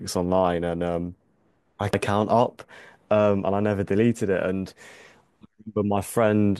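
At 1.94 s the speech is broken by damaged data in a compressed stream: corrupted bytes make the decoder misread a frame and resync on the next header, giving a brief glitch. A spectrogram shows a thin broadband smear; the waveform shows a tiny glitch.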